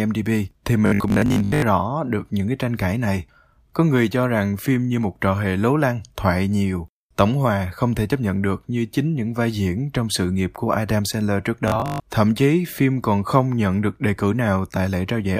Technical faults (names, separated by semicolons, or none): robotic sound from repeated short buffers